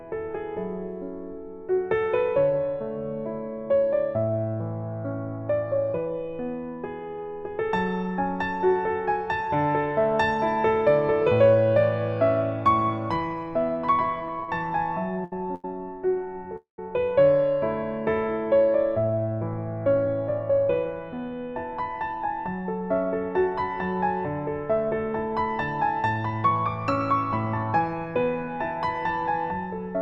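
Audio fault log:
14.28–15.65 s, repeated stalls (stutter): five short hold-ups, the longest 90 ms, filled by continuing the last sound, 233 ms in all, about 17% of the span. The buffer ran dry repeatedly, so the sound drags in hiccups rather than stopping once. Nothing is lost.
16.56–16.79 s, call audio freeze: a single 216 ms break where the last sound trails off and the final 120 ms goes silent, likely because delayed packets emptied the jitter buffer. Unlike the stutter, it is one longer halt. The sound resumes where it stopped, 216 ms later.
19.87–21.19 s and 26.10–28.07 s, jitter buffer speed-up: the sound runs at 106% speed, about a tenth of a second trimmed each time in pitch-period slices to shrink excess buffering. The pitch stays unchanged, which distinguishes this from a faster playback rate. The passages sound slightly hurried.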